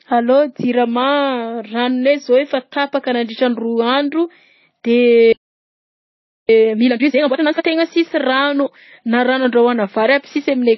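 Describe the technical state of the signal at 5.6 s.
At 5.6 s the speech has stopped dead: silence runs from 5.32 s to 6.49 s, about 1.16 s, before the sound continues. This is a playback stall, likely from the player running short of data or its output thread being blocked until it recovered.

Around that gap the speech is dull, with nothing above 5.8 kHz, and two kinds of compression smearing are layered together. That is likely transcoding between lossy codecs, consistent with a low-rate MP3 near 24 kbit/s re-encoded as AAC-LC near 32 kbit/s.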